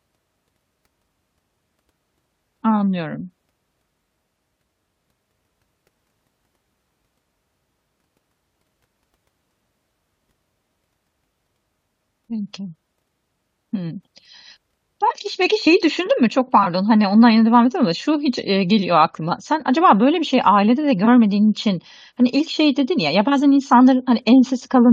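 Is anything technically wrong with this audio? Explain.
Yes, it's speech with three short corrupt frame concealed events, at 15.08 to 15.12 s, 16.63 to 16.66 s, and 21.05 to 21.08 s. Damaged bits in the AAC stream were caught by the decoder, which patched those frames itself by muting or reusing a scrambled copy of the previous spectrum. You hear soft-edged little holes or smears of about 30 to 40 ms rather than clicks.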